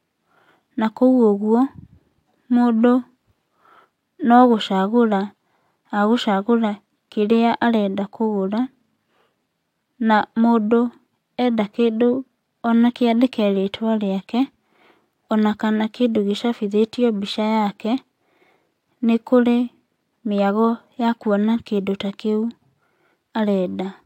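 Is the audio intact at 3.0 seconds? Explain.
Yes, the speech at 3.0 seconds is intact, with no audible fault at that moment.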